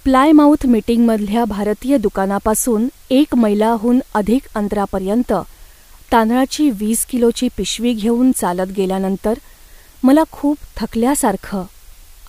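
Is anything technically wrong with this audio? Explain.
Yes. Throughout the speech there is low bit depth with dither: the signal has been reduced to 8 bits, with a small random signal added before each sample was rounded. That randomness turns the rounding error into a steady, even hiss about 35 dB below the speech. Without dither, the same coarse rounding would produce a gritty distortion that follows the speech and drops away in pauses. Here the hiss is constant and carries no distortion.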